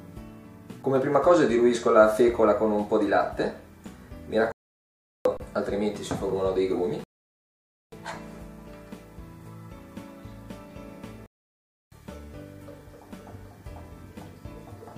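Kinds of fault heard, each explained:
Underrun with held sample: The output buffer ran dry and the converter just sat on its last sample value, so the waveform goes flat instead of dropping to zero and the sound halts without much of a click going in. There's a tiny one at 3.30 s, only about 3 ms, and a longer one from 5.37 to 5.40 s, about 30 ms. Audio went missing during each gap.
Playback stall: The sound simply stops mid-flow and the output sits silent for a noticeable stretch before carrying on. The first is from 4.52 to 5.25 s, about 734 ms, and the second from 11.26 to 11.92 s, about 656 ms. The likely cause is that the player ran short of data or its thread got blocked for a moment, which holds up the output until it recovers and starts feeding the converter again.
Rebuffering stall: Here the player ran out of downloaded audio and paused until more arrived. You get a cut to silence from 7.04 to 7.92 s, and then the sound resumes exactly where it left off, with nothing skipped. 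So no audio is lost, but the clip gains roughly 885 ms of dead air in the middle, which stretches the timing.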